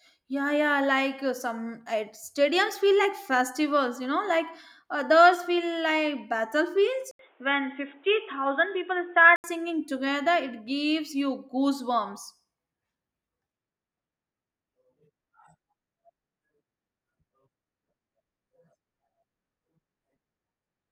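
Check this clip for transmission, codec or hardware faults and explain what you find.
One fault is present: an input switched to a poorer device, from 7.11 s to 9.44 s. After "others feel like battlefields", the sound drops out for about 80 ms, then returns dull and boxy with nothing above 3.7 kHz and a faint new noise floor, at roughly the same loudness. The likely cause is the recording path moving to a narrower-band microphone or headset call profile. Full bandwidth comes back before "together it gives you".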